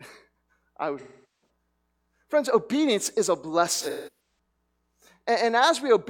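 AAC frame loss with concealment hits 0.99 to 1.49 s. About 0.43 s of coded audio went missing, and the decoder rebuilt it from the last good spectrum, giving a smeared, noisy patch. From 3.81 to 4.57 s, scattered shorter losses, the longest around 150 ms, leave phasey, broken stretches.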